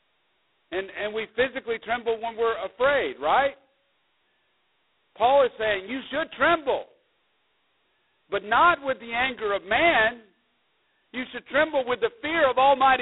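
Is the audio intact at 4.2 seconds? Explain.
No. At 4.2 seconds, as across the whole clip, the speech carries G.726 ADPCM damage. Coding each sample as a coarse difference from a predicted value leaves a harsh, rasping hiss riding on the voice's level, which fits the 16 kbit/s mode. The band runs roughly 300 Hz to 3.7 kHz, with nothing above 3.9 kHz.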